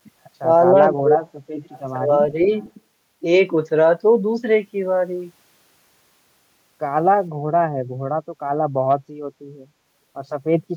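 Speech drops sharply from 0.92 to 1.33 s and from 1.54 to 1.72 s, falling by roughly 40 dB, with a slight dip of about 5 dB at 2.05 to 2.1 s. This is likely speech suppressed in double talk, where the echo canceller turned down the local talker while the far side was also speaking. Faint repeats of the voice arrive about 460 ms late at 1.71 to 1.8 s and 2.43 to 2.71 s, sitting about 25 and 30 dB below the direct speech. That is likely echo leak, where loudspeaker sound reached the microphone and slipped past the canceller. The room tone briefly dips by about 13 dB at 7.84 to 8.01 s and by about 10 dB at 8.27 to 8.33 s. This is background gated by the echo canceller, which pulled the microphone down while the loudspeaker played and then released it.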